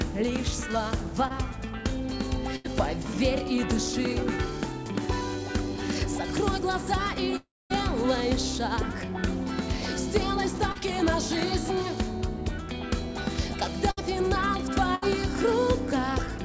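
At 1.28 to 1.32 s there's a short concealed packet loss: about 20 ms of audio didn't reach the decoder in time, so the receiver carried the previous sound through the gap and blended back into the real signal. You hear it as a tiny smear or wobble rather than a clean cut. The same thing happens at 10.72 to 10.77 s, where about 40 ms went missing and roughly 31 ms was patched over.

The first burst of packet loss hits at 2.56 to 2.66 s. About 80 ms never arrived, so the receiver stretched the last bit of sound and faded it down across the gap. That gives a held buzz or a fading hiss, and then the audio picks up further along with that chunk gone. It happens twice more, at 13.91 to 13.99 s and 14.95 to 15.04 s, each losing about 60 ms with a similar brief fade-and-jump.

From 7.36 to 7.72 s you get the long one. The last sound drags on and fades, then there's roughly a quarter of a second of near-silence before the audio comes back, with about 340 ms missing. 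That's most likely a long network dropout, where nothing got through for that stretch. Across the whole clip there's nothing above 8 kHz, which fits the G.722 call codec at around 64 kbps on the call path.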